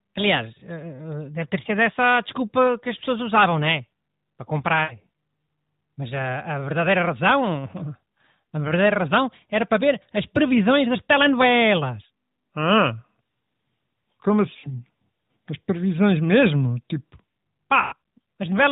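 Speech carried over an AMR narrowband mobile codec, with nothing above 4 kHz and light codec colouring. It has lost AMR speech frames at 4.84 to 4.95 s, 14.60 to 14.79 s and 17.82 to 17.94 s. About 60, 40 and 100 ms of audio are missing. The decoder repeats the last good frame with falling gain. The sound smears, then fades. It comes back weak and rough for a moment.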